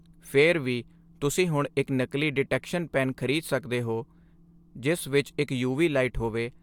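No technical faults can be heard anywhere in this speech recording.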